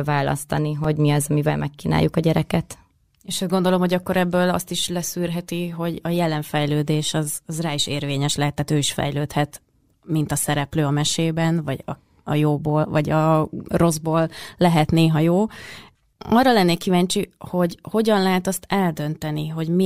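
At about 0.84 s, just before "mi az amivel megkínáljuk", there's a repeated buffer. The audio didn't get to the device in time, so it replayed the last tiny chunk twice more, roughly 1.45 ms each, which fits a 64-sample buffer. With pieces that short, the repeats don't register as a stutter. You hear a quick click or brief buzz where the hard joins stack up, and a few milliseconds of the speech go missing.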